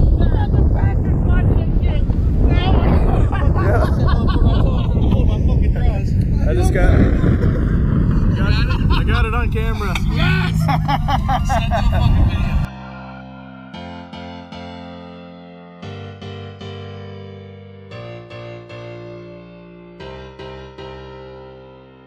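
Throughout the clip the two channels are drifting apart: they behave as if captured on separately clocked devices, off by around 100 ppm, so the inter-channel delay grows to about 2 ms by the end. Summed to mono, comb notches sweep slowly, heard as gradual flanging.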